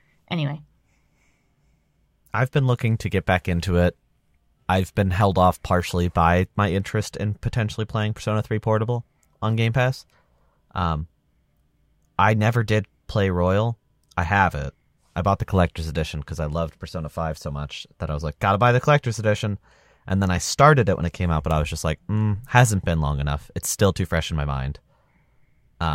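No technical faults are audible.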